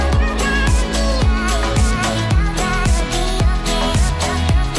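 No technical faults were found in this audio.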